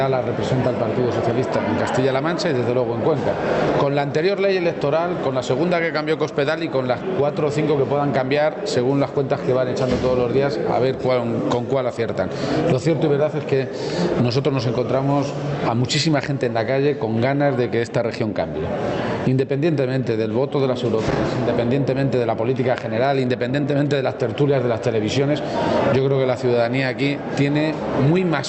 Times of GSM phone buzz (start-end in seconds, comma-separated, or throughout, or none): none